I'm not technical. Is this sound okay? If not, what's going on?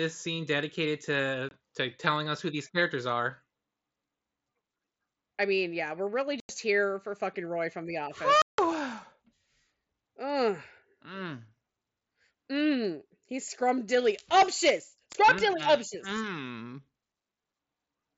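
No. This is unconcealed Bluetooth headset packet loss: short pieces of sound from headset to phone went missing and became silence. Abrupt gaps occur at 1.49–1.51 s, 6.40–6.49 s, 8.42–8.59 s (longest, about 0.17 s) and 15.13 s. Nothing fills or smooths these holes.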